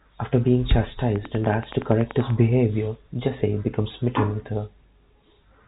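A train of clicks runs from 1.16 to 2.31 s: around fifteen evenly spaced, near-identical pulses at 10.5 per second, peaking roughly 10 dB above the speech. Likely interference or a faltering interface, it ticks steadily over the telephone-band audio, which stops near 3.8 kHz.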